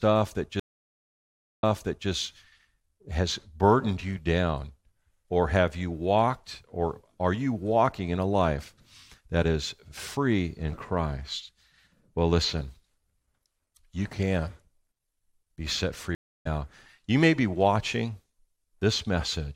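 Two stream reconnects here. At 0.60 s the speech drops out for about a second, then the restarted decoder picks up roughly 0.47 s earlier, so you hear a bit repeated. At 16.15 s, right after "be set", there's a 0.3 s gap and it resumes around 0.3 s later, skipping ahead.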